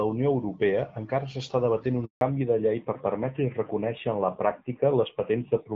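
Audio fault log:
2.05–2.21 s, handover gap: the speech fades out within a few tens of milliseconds and leaves 160 ms of silence. The call was passed between networks, and no speech frames arrived until the new link took over, so that stretch is lost.
2.21–5.75 s, fallback to narrowband: after the gap the speech sounds duller and rougher, with nothing above 4 kHz. The call has dropped from HD Voice to an older narrowband codec, which fits a change from AMR-WB at 12.65 kbit/s to AMR-NB at 7.4 kbit/s.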